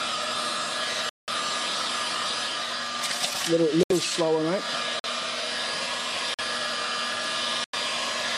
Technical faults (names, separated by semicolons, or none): corrupt frame muted